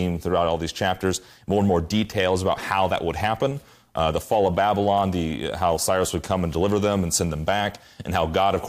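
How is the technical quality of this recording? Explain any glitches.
No glitches or technical faults can be heard anywhere here.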